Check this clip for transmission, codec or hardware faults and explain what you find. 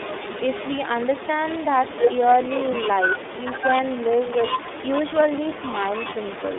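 The whole clip has been through the iLBC codec, a narrowband VoIP coder. It runs from start to end. The band is held to roughly 250 Hz to 3.6 kHz, so nothing above 4 kHz survives. The speech sounds muffled and boxy. Each 30 ms frame has its excitation coded on its own, at a rate that fits 13.33 kbps. This leaves a plainly audible rough, synthetic grain on the speech.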